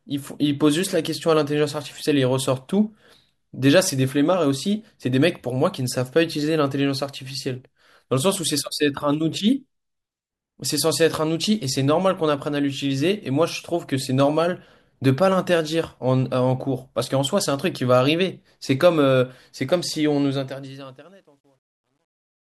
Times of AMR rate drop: none

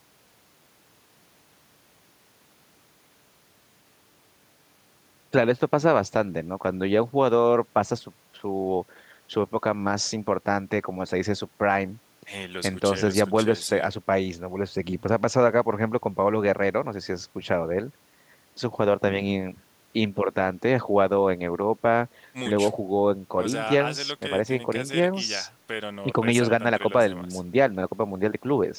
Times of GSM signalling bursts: none

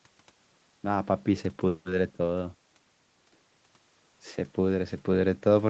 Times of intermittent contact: none

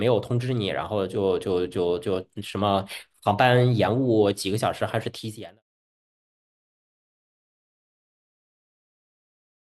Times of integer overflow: none

